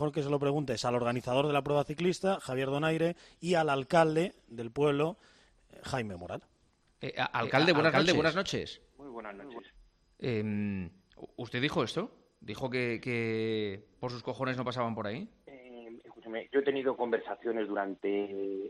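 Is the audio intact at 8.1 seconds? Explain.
No. A doubled audio track runs from 7.41 to 9.59 s, so 8.1 s falls inside it. A second, full-band copy of the same audio sits roughly 400 ms behind the original at about the same loudness, likely from a slower capture path or an edit holding two copies out of step. It sounds like a dry, evenly loud echo with no decay or room colour, and it starts and stops abruptly.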